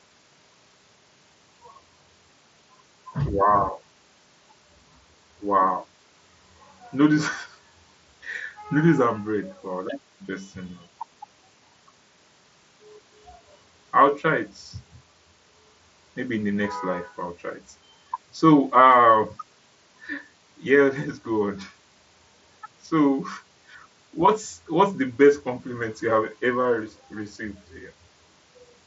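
No technical faults; the speech arrives over a Bluetooth mSBC headset link, band-limited at 8 kHz, with the light grain on louder passages that this codec leaves.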